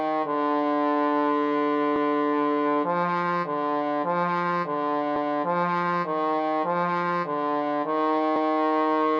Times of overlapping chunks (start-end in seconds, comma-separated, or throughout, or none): 1.96-2.16, 5.16-5.36, 8.36-8.56